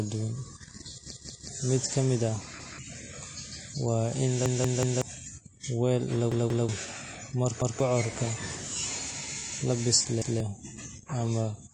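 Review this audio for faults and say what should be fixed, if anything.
Repeated buffer: new audio failed to reach the output in time, so the device replayed its last block of about 186 ms, which fits an 8192-sample buffer. Each gap becomes a hard-joined stutter at 1.12 to 1.49 s, 2.60 to 2.79 s, 4.46 to 5.02 s, 6.32 to 6.69 s, 7.62 to 7.80 s and 10.22 to 10.40 s, with the longest losing around half a second of sound. A larger playback buffer or a more reliable delivery path would stop these underruns.

AAC compression: the signal was likely encoded with AAC-LC at a low bitrate, around 32 kbps. The codec discarded everything above 9.8 kHz, so the sound is plainly dull and smeared, with a fizzy, warbling texture on sibilants. Re-encoding from the source at a higher bitrate would restore the top end.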